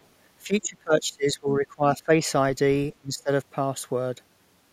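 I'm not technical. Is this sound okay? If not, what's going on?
No. From 0.45 to 2.2 s and 3.0 to 3.3 s, speech drops sharply in level, likely speech suppressed in double talk, where echo cancelling turned down overlapping talk.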